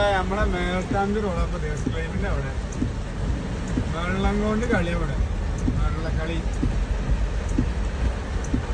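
Nothing goes wrong anywhere in this audio, so there's no technical fault to point out.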